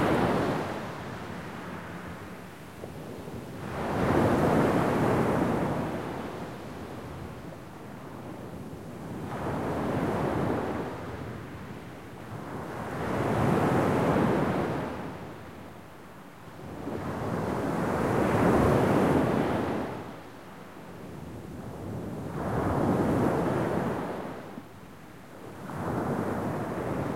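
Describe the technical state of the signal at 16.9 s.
At 16.9 s the sound is intact, with no dropout, click, distortion or other fault to be heard at that moment.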